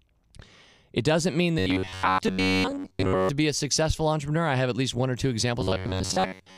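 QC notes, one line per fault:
1.59–3.29 s and 5.61 s to the end, robotic sound from repeated short buffers: right after "doesn't mean" until "be a successful entrepreneur", and again after "least one or two", the speech goes to a stiff metallic buzz fixed at 93.8 Hz. It's likely the playback starving and looping the last bit of audio, about 10.7 ms a go. Those repeats replace most of the real signal, so only the rough shape of the words survives.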